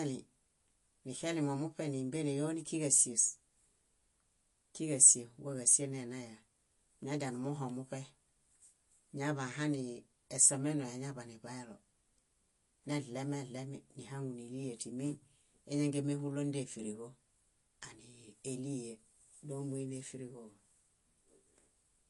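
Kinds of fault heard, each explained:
MP3 compression, throughout: the speech stops dead at 11.2 kHz and sounds plainly watery and swirling, with metallic chirps on s sounds and smeared attacks, likely from an MP3 encoder short of bits (fitting about 48 kbps) cutting treble and flickering weak frequency lines between frames.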